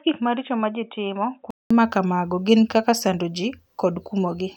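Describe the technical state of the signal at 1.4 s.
At 1.4 s the speech is band-limited, with nothing above 3.8 kHz, about 10 dB quieter, and carries a different faint noise floor. This runs from 0.0 to 1.7 s and is likely an input switched to a poorer device. Unlike a plain filter, the tone, level and noise all change together, ending at a 200 ms silence before "ma kamago gin kaka".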